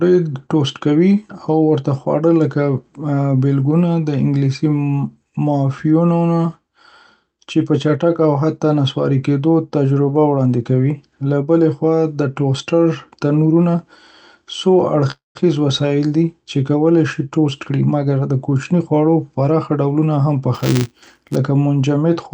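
From 15.11 to 15.37 s there is a call audio freeze, likely packets held up in transit until the jitter buffer ran dry. The receiver stretches the last sound into a fading buzz or hiss that drops to silence for about 150 ms. The speech then resumes where it stopped, roughly a quarter-second later than before, with nothing lost.

Between 17.20 and 19.95 s comes a jitter buffer speed-up. The buffer had built up surplus audio, so the receiver repeatedly cut out pitch-period-sized slivers, about a third of a second in total. The speech runs at 109% speed without any change in pitch, and it sounds hurried.

From 20.54 to 21.36 s there is buffer tearing. The writer and reader of the output ring buffer have drifted until they cross inside each period, so a thin slice of every buffer holds audio about 10 ms stale, with hard joins at both edges. The result is a robotic 200 Hz buzz that rides on the speech. 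The call codec's band limit near 8 kHz can be heard throughout the clip.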